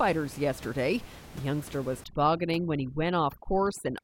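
From 2.04 s to the end of the clip, right after "youngster was", overdone noise removal sets in: a noise reduction stage pushed too hard shuts off individual frequency bands whenever they sit near its noise estimate, taking the softer parts of the speech with them. The room noise, about 18 dB below the speech before this point, drops and breaks up into twinkling specks. Unlike a noise gate, which mutes everything at once, this removes narrow bands independently, leaving scattered tonal flecks.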